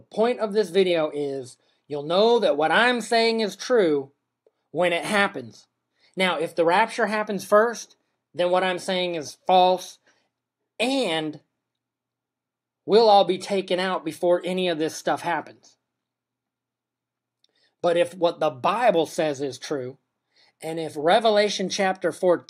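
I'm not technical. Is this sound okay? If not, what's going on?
Yes, it's fine; nothing in it sounds broken or glitchy, so there's nothing you need to worry about.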